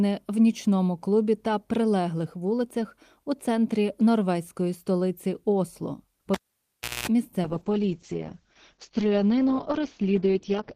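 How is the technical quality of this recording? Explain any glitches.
The recording has two clear glitches in its second half.

From 6.34 to 7.08 s, a cable was pulled and plugged in while live. A pop cuts the sound to near silence for about 0.69 s, a 60 Hz mains buzz lasts roughly 0.22 s as only the tip makes contact, and a second pop brings the sound back.

From 7.42 s to the end, there is a call bitrate drop. The encoder was forced onto far fewer bits, coding coarsely and cutting the bandwidth to 6 kHz. The sound turns muffled and rough, which fits a fall from 32 to 8 kbps.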